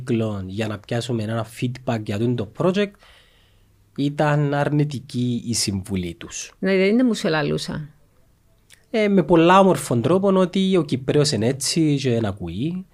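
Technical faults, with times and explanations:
Nothing stood out on listening to this speech recording.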